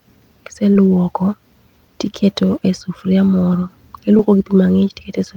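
Short concealed packet loss occurs at 0.73–0.77 s and again at 4.17–4.21 s, just after "tiketo e sufuria moro". About 20 ms of audio arrived too late each time, and the receiver extrapolated the preceding sound for 15 ms and 18 ms before blending back, leaving brief smeared patches.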